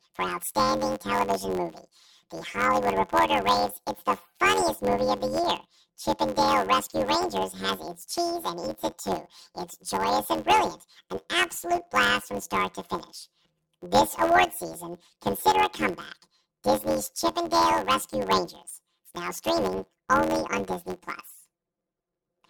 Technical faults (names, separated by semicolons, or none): planar audio read as interleaved